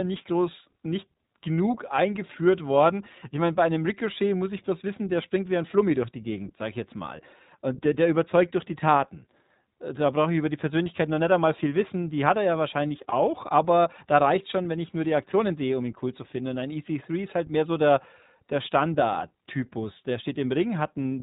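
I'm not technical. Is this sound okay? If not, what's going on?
No. The iLBC codec shapes the whole recording: this phone-call compression keeps nothing above 4 kHz and rebuilds the voice in short separate slices, so the speech sounds muffled, thin and plainly rough or synthetic from start to finish.

Lost iLBC frames cause a brief glitch from 13.10 to 13.14 s. One 20 ms slice of audio went missing, and the player filled the gap by repeating the last bit of voice with some noise, giving a tiny buzzy blip before the speech recovers.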